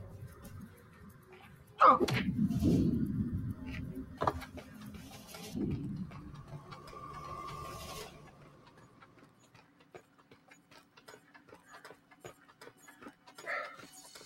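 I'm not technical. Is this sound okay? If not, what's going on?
No. A noise suppressor built for speech was applied to music or sounds, so it keeps treating steady tones and fading tails as noise, making the level swing up and down.

The sound was cut by the noise suppressor at 0.68 to 1.29, 1.53 to 1.74, 8.11 to 11.02, and 11.97 to 12.18 seconds, where held parts sink and thin out.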